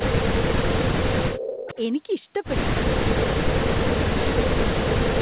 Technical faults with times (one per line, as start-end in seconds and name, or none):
0.00-1.37 speech suppressed in double talk
0.79-0.83 echo leak
1.32-1.84 echo leak
3.22-3.94 speech suppressed in double talk
4.32-5.21 speech suppressed in double talk